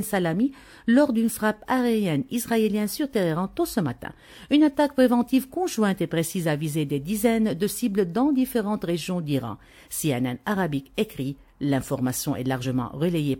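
Near the end, between 12.61 and 12.65 s, compressed frames are skipped: about one frame of roughly 50 ms is missing, consistent with a 46.4 ms frame length, so the audio jumps ahead at that point.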